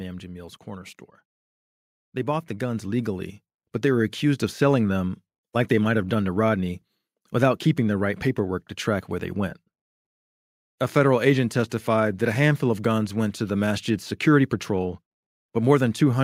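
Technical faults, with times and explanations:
0.64–4.88 s, automatic gain rising: level climbs about 9 dB before "them like they might", background noise swelling with the speech, unlike a talker simply moving closer.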